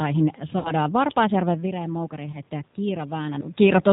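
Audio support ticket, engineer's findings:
G.729 codec, whole clip: band-limited speech, nothing above 4 kHz, rough synthetic edge, room noise warbling. Consistent with 8 kbit/s G.729 rebuilding each 10 ms frame from filter, pitch and few pulses. Constant throughout, unlike the localised dropouts below.

VoIP packet loss concealed by the speech codec, 0.59–0.72 s and 2.32–2.37 s: sound smears into a fading buzzy tone or coloured noise. Roughly 60 ms missing, then 20 ms, pointing to three packets and one. Decoder extrapolates the last pitch and filter, and recovery lags. Not the talker-movement level shifts near 1.5 s and 3.5 s.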